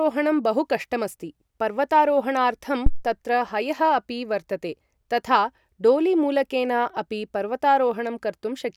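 At 2.86 s the speech is hit by a phantom power thump lasting until 3.06 s. A supply on the live microphone input was switched, and that sudden voltage step passed through the coupling capacitors. The result is a deep, dull thud under the speech. It peaks at about -5 dBFS. The low-frequency energy dies away quickly, with a decay of about 45 ms.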